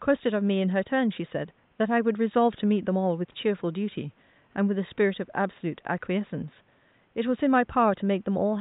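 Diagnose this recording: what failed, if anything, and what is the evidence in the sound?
Nothing failed; only faint room noise sits beneath the speech.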